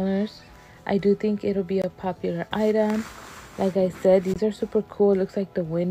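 At 1.82 to 1.84 s and again at 4.34 to 4.36 s there's a gap between chunks, a 20 ms hole of silence. The audio's arriving in 2.5 s blocks, and each join leaves a brief dropout, though no sound is lost.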